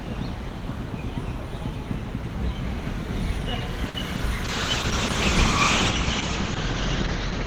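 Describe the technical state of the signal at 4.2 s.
At 4.2 s the signal carries a short concealed packet loss, spanning about 4.16 to 4.20 s. Roughly 20 ms of audio failed to reach the decoder in time, so the receiver synthesised a replacement by extending the preceding sound for about 20 ms and then blending back into the received stream. The result is a brief smear or wobble rather than a clean gap.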